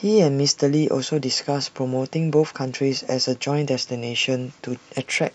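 Speech, and right at the end, from 4.95 s to 5.35 s, a Bluetooth SBC bit pool drop dulls the treble and adds grit, which fits the link falling from a bit pool of 28 to 10, around 84 kbps.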